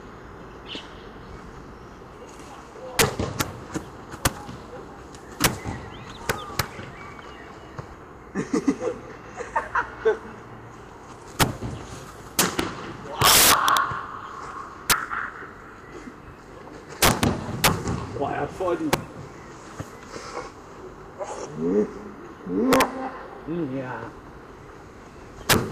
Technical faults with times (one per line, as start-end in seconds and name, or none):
0.00-25.71 integer overflow